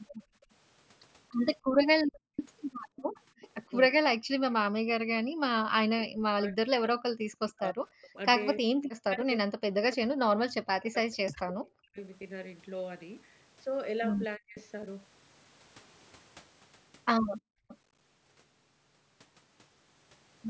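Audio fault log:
0.18–3.16 s: background gated by the echo canceller. Room sound dips by up to about 39 dB, for under a second in all. The canceller clamps the microphone while the far side plays.
0.41–3.49 s: echo leak. A delayed copy of the speech, about 10 dB down, trails by 299 ms. Residual loudspeaker pickup likely slipped past the canceller.
3.69–11.99 s: speech suppressed in double talk. The talker dips by around 40 dB, about five seconds in total. Both sides speaking at once likely confused the canceller.
8.02–8.18 s: echo leak. A faint scrap of echo, about 30 dB down, follows at 314 ms. Likely a brief canceller miss.
14.37–14.57 s: speech suppressed in double talk. A short cut of about 40 dB, lasting a fifth of a second. Likely overlapping talk triggered suppression.
14.56–14.60 s: echo leak. A tiny echo burst, about 25 dB down, at 329 ms delay. Likely leftover loudspeaker signal.
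17.41–17.68 s: background gated by the echo canceller. Room sound drops by up to about 37 dB for a fraction of a second, then returns.
17.68–17.77 s: echo leak. A brief echo, about 25 dB down, arrives 337 ms late. Likely residual pickup after the gate released.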